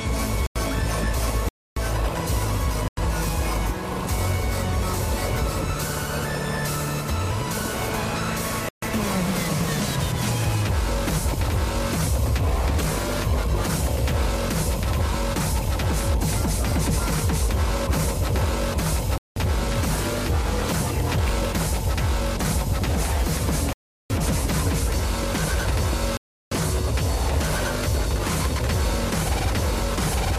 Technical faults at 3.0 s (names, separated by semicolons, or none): block of digital silence